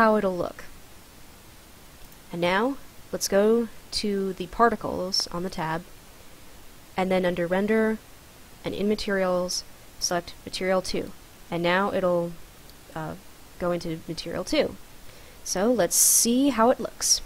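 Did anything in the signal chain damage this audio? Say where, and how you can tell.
Yes. A single loud pop sits at 5.20 to 5.22 s, a sharp click peaking a few dB above the surrounding signal, with the audio carrying on unbroken beneath it. The stage is likely the analogue wiring, where a voltage step from a plug, switch or static discharge was added.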